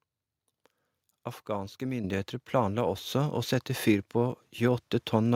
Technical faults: microphone volume stepped up

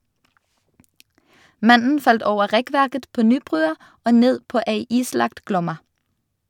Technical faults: none

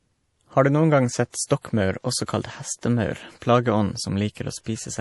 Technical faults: MP3 compression; pre-echo

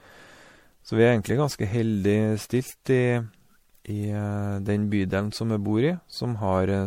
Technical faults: generation loss

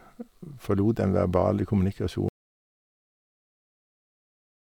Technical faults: audio dropout to silence

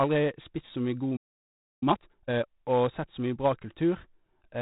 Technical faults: 4-bit ADPCM compression; playback stall; time-compressed catch-up

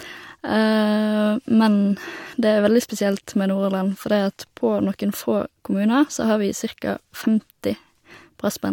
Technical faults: none

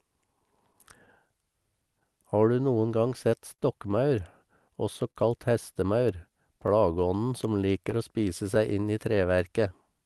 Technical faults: clock drift between sender and receiver; repeated timing corrections; scattered short gaps; short stall from a late packet

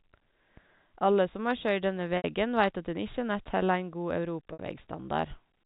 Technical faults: packet loss with pitch repetition

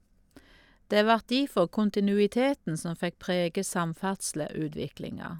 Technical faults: none

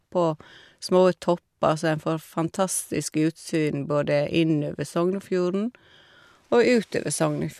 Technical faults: none

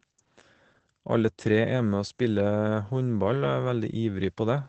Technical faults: Opus voice compression

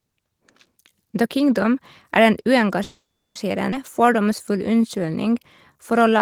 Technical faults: call audio freeze; skip ahead; jitter buffer slow-down

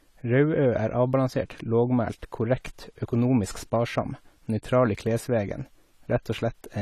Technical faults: AAC compression

